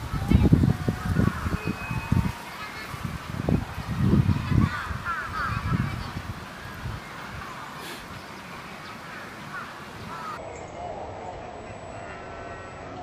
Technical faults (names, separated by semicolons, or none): section at the wrong speed